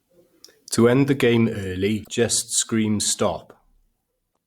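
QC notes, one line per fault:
2.01–2.08 s and 4.29–4.37 s, damaged data in a compressed stream: corrupted frames make the decoder lose sync, producing a brief chirp, squawk, click or short hole until it finds the next valid frame header.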